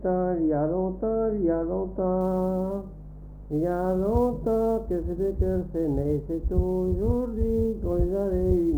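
From 2.21 s to the end, the audio carries sample clock jitter: a grainy hiss rides on the sound and grows with loud, bright passages, sitting roughly 35 dB below the signal. The converter's clock wanders by several microseconds, so each sample lands slightly off time, and steep, fast-changing waveform segments turn that timing error into amplitude error. Unlike a constant noise floor or dither hiss, it disappears whenever the sound goes quiet.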